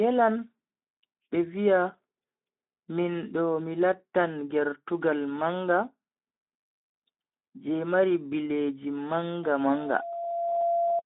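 Throughout the clip, the speech passes through a Speex codec at a low setting, consistent with a rate around 11 kbps. Too few bits describe the excitation, so the voice sounds plainly noisy and hoarse, confined to about 150 Hz to 3.6 kHz, with nothing above 3.8 kHz.

From 9.43 s, just after "je mari bileji", to 11.02 s, a microphone picks up its own loudspeaker and the loop gain exceeds one at 685 Hz. This loudspeaker feedback squeal swells over about a second into a steady tone roughly as loud as the speech.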